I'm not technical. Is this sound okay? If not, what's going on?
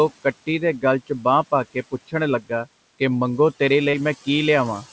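No. Two brief problems stand out in this speech.

From 1.74 to 2.14 s, just after "ਗਲ 'ਚ ਬਾਂਹ ਪਾ", the speech is cut by the noise suppressor. It mistook soft parts of the speech for background noise and turned them down, about a tenth of a second in all. Those bits sound faint or swallowed rather than broken.

From 3.90 to 3.95 s, just after "ਕਿ ਮੰਗੋ ਤੇਰੇ", there is a short concealed packet loss. A few hundredths of a second of the call arrived too late, and the receiver patched the gap by stretching the sound just before it. Unlike the suppressor's fading, this comes across as a quick smear or wobble.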